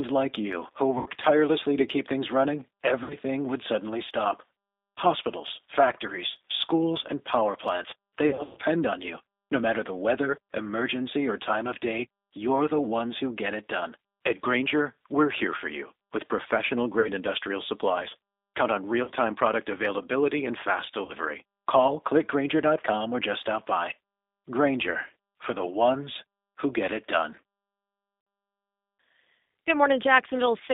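Speech heard through a G.729 codec at 8 kbit/s, confined to a telephone band of roughly 250 Hz to 3.7 kHz. The coding damage is plainly audible: a slightly rough, synthetic texture that comes from rebuilding each 10 ms frame out of a vocal-tract filter, a pitch predictor and a handful of pulses. That texture separates it from simple low-pass filtering, which dulls the sound without making it sound manufactured. VoIP packet loss concealed by the speech codec breaks in at 0.98, 3.04, 8.29, 17.00, 19.03, 21.05 and 28.21 s. Most gaps are 40 to 80 ms long. The worst, at 8.29 s, loses 220 ms scattered over 280 ms, with a longest run of 120 ms. Instead of silence or a click, as a plain dropout would give, the decoder stretches the last pitch and filter into a fading buzz or coloured noise, and the sound stays weak briefly after each gap.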